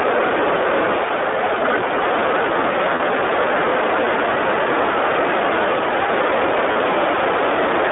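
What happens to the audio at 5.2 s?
At 5.2 s the speech is still carrying the two faults that run through the whole clip. The first is hard clipping. The level has been pushed about 10 dB past what the signal path can hold, so the loudest peaks are sheared flat. Only a small fraction of the waveform, around two percent, reaches that ceiling, but each flattened top sprays harmonics high into the spectrum, and the louder syllables carry a crackly, gritty edge. Soft saturation or a limiter would sound different. Those round the peaks off gradually and thicken the tone, while this distortion switches on abruptly and sounds brittle right at the peaks.

The second fault is iLBC codec coding. The audio is confined to a telephone band of roughly 300 Hz to 3.6 kHz, so it sounds thin and boxed-in with no air above. Inside that band, plainly audible coding damage gives the speech a rough, slightly synthetic buzz. 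The texture fits a low-rate VoIP codec near 15 kbps that models each 20 ms frame of excitation on its own. A plain low-pass filter would only dull the sound. Here the band limit comes with that artificial, vocoder-like graininess.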